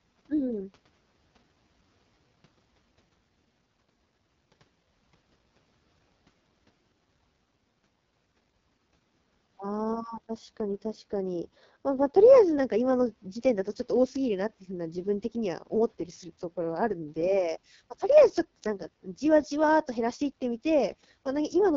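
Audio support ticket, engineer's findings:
AMR wideband (HD Voice) codec, throughout: rough, raspy speech, heavy damage consistent with the lowest 6.6 kbit/s mode; excitation model strained, nothing above about 7.1 kHz, top band noise-filled.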